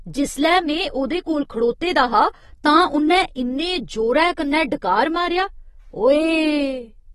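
From start to finish the speech carries plainly audible AAC compression damage, likely from AAC-LC at a low bitrate around 32 kbps. Nothing sits above 12.5 kHz, so it sounds dull and smeared, with fizzy, warbling sibilants. A spectrogram shows a flat ceiling there.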